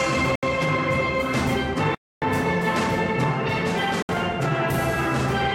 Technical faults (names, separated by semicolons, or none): Bluetooth stall